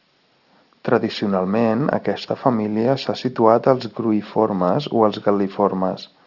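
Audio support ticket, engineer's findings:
Aliasing, throughout the speech. Sibilants gritty and metallic, energy packed hard against a 6 kHz band edge. Probable component: resampler lacking an anti-alias filter, which fits a drop from 48 kHz to 12 kHz. Content above 6 kHz folds back as unrelated tones, roughly 25 dB below the signal.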